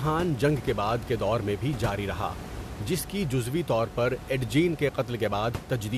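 No technical faults can be heard anywhere in the recording. A background of room noise sits about 12 dB below the speech, belonging to the space where the microphone was placed rather than to the system.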